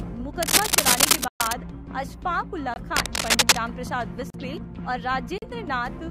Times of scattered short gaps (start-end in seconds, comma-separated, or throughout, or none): none